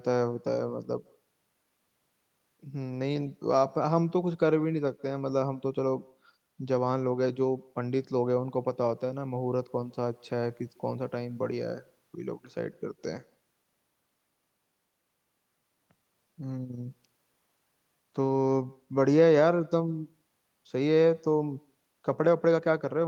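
Echo with no canceller runs throughout: the far end's loudspeaker feeds its microphone, returning this speech roughly 150 ms later as a faint, thin shadow about 29 dB down.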